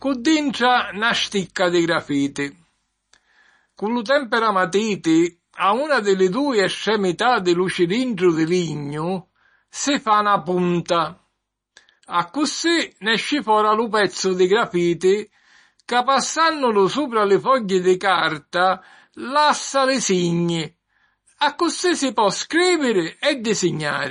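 Throughout the speech, the treble stops dead at 9.8 kHz and faint detail warbles in and out, giving a watery, swirly edge to s sounds; this is likely MP3 compression at a starved bitrate near 32 kbps. A spectrogram shows a flat ceiling and flickering holes.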